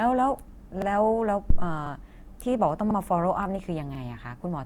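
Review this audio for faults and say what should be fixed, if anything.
Throughout the clip the speech has a swirly, smeared, hollow quality, with blurred consonant onsets. That is more damage than a single moderate-rate encode would cause. The likely cause is generation loss: the audio seems to have passed through Opus several times at settings that fit about 64 kbit/s. Each pass requantises on a fresh frame grid, so noise and spectral holes build up. A single low-bitrate encode mainly sounds dull. This damage sounds phasey and warbling, and high content still extends to about 20 kHz. To prevent it, keep a lossless master and encode only once, at the final stage.

Overlapping chunks cause a short stutter with a click at 0.82 s, 1.87 s, 2.91 s and 3.95 s. Each time, about 44 ms of sound plays twice. The chunks overlap at their joins instead of meeting cleanly, so the tail of one chunk repeats at the start of the next, at a steady rate of roughly one per second. 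Dropouts leave gaps, and random glitches fall at irregular times. These events are repeats and arrive on a regular grid. To prevent it, trim or crossfade each chunk's overlap when reassembling the stream.

A phantom power thump starts at 1.50 s: a deep low-frequency bump that dies away over about 44 ms, and the disturbance lasts until about 1.70 s. A supply step on the live input has passed through the coupling capacitors as a single pressure-like pulse. A plosive pop is shaped by the talker and sits on a consonant. This thump is an electrical transient, deeper and more abrupt, and it is unrelated to the speech. To prevent it, mute the channel before switching phantom power.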